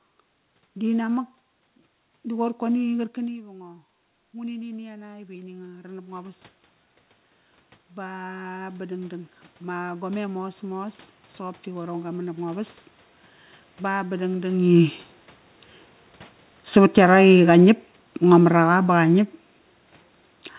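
The automatic gain control misjudged the level three times. Around 3 s the talker moves back from the microphone and the input drops by about 16 dB. From 3.2 to 6.49 s the control answers with an automatic gain rise of about 10 dB, and the voice and room noise swell up together instead of holding steady. A second rise runs from 7.95 to 12.73 s, adding about 8 dB over nearly five seconds, so the background lifts slowly along with the speech.

The talker moves again around 14.5 s. From 16.64 to 19.31 s the automatic gain falls by about 5 dB. The voice starts loud and then sinks gradually, with the room noise dropping in step. Throughout, the call codec path caps the sound at 4 kHz, which gives it a narrowband, telephone-like tone.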